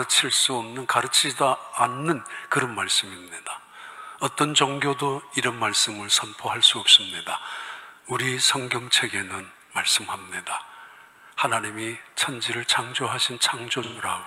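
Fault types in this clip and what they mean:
AAC frame loss with concealment: near the very end, from 13.83 to 14.03 s, about 128 ms of coded audio drops out, which fits three lost frames, and the decoder patches the gap by extrapolating from the last good spectrum, leaving a brief smeared, noisy, phasey stretch rather than a clean gap.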